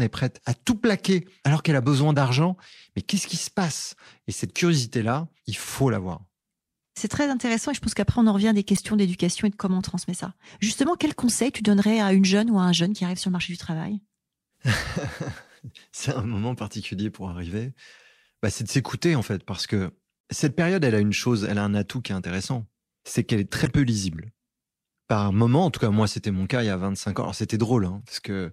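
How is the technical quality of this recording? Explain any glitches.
The speech carries three short glitches from damaged data in a compressed stream: at 8.75–8.78 s after "on en revient des", at 20.21–20.23 s after "en fait parce que", and at 23.65–23.67 s after "c'est qu'elle est très". Corrupted bytes made the decoder misread frames and resynchronise. Each is brief, lasting only a few hundredths of a second.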